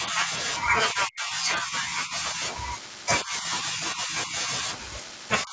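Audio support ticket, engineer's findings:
Speech suppressed in double talk, four stretches: 0.00–0.32 s, 0.92–2.42 s, 3.23–4.64 s, 5.42 s to end. Level dips and choppy cut-outs, roughly 10 to 15 dB, deepest near 25 dB in the last. Likely cause: echo canceller misreading near-end speech as far-end echo, attenuating both. Waveform shows notched, gated envelope; spectrogram shows thinned upper harmonics and gaps. Band-limit at 8 kHz from call mic processing is expected.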